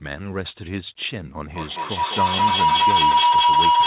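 A speech recording where a loop between microphone and loudspeaker builds up feedback howl from 1.53 s to the end at 3.87 s, ringing near 1 kHz, repeating roughly every fifth of a second and reaching about 12 dB above the speech, all heard through a call path with nothing above 4 kHz.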